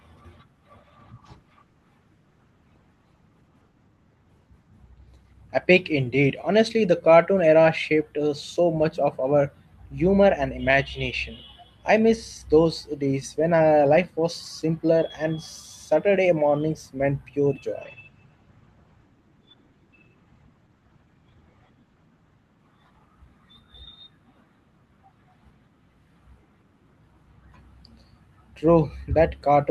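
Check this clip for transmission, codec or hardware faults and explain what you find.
There are two call bitrate drops, both on the Opus call link. The first runs from 0.84 to 6.73 s and clears just before "the cartoon era shaped". The second starts at 17.82 s, right after "mornings meant pure", and lasts to the end. The encoder was pushed to code more coarsely, roughly halving the rate the first time and cutting to about a third the second, which fits around 16 and 11 kbps. It also narrowed the band from 12 kHz and then 20 kHz down to 8 kHz. Each time the speech goes dull and watery, worst for about 4.6 s and 4.3 s.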